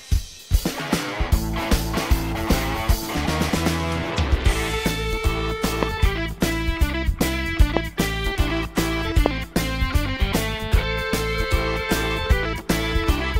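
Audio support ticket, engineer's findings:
Adaptive stream starting at a low bitrate, 0.0 to 4.0 s: dull, thinned top end and heavier codec artefacts, consistent with an HE-AAC start near 32 kbit/s. Abrupt, gapless step up, fitting a switch to AAC-LC near 96 kbit/s.

Loud pop, 5.83 to 5.85 s, 7.77 to 7.79 s, and 9.26 to 9.28 s: three single sharp pops, each about 20 dB above the signal, which continues underneath. Likely a voltage transient from a connector, switch, static discharge or driver glitch.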